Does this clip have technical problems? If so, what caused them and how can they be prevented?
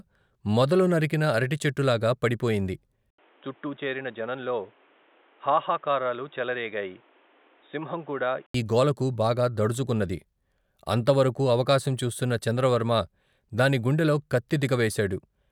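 Yes. From 3.10 to 8.54 s, right after "మొదలు నరికిన అరటిచెట్టులాగా పడిపోయింది", the speech turns dull and boxy. Nothing above 3.8 kHz remains, an 80 ms silence marks the switch, and the level drops about 5 dB. A new background noise sits roughly 30 dB down. The sound clears again before "ఈ గోలకు బాగా దడుచుకున్నది". This is likely an input switched to a poorer device. Preventing it means fixing the input device in the recording software and disabling automatic switching to headset call profiles.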